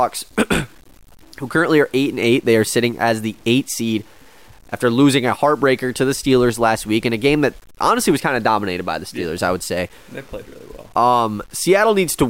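Throughout the speech, grainy distortion follows the signal and drops to silence or sputters in pauses, unlike steady hiss; likely low bit depth without dither, fitting 8-bit truncation.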